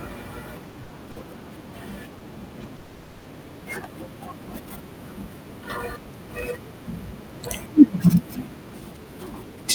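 From 0.69 to 1.18 s the speech catches and drags in a series of small hitches, a repeated stalls (stutter) pattern. Four times in under half a second the last bit of sound is held and prolonged before the speech resumes. Together those holds fill about 130 ms, the longest about 60 ms, so roughly a quarter of the stretch is stand-in sound. Packets were arriving late or more slowly than they were played, so the jitter buffer kept draining. The receiver padded each wait from what it had just played, and nothing is actually lost.

Between 2.18 and 2.22 s a single sound hangs on a touch too long, with a slight buzz or dip, the mark of a short stall from a late packet. One packet missed its slot and the jitter buffer emptied. The receiver stretched the preceding sound by about 20 ms until the packet turned up, then continued from exactly where it had paused. The delay grew by that same 20 ms, and nothing is skipped.

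At 2.76 s the speech stops moving forward, and for about half a second, until 3.26 s, a held continuation of the last sound stands in for it. It never drops to true silence. Then the speech picks up where it left off. This is a call audio freeze, likely caused by packets being held up in transit long enough to empty the jitter buffer. About 480 ms of filler was inserted, adding that much delay, and nothing is missing.

From 8.98 to 9.65 s the speech sounds hurried, running at about 113% of normal pace while its pitch stays put. This is a jitter buffer speed-up. The buffer held more audio than it aimed for, so the receiver trimmed out many tiny pitch-period-sized slices in a row. Together they amount to about a tenth of a second, enough to pull the delay back down.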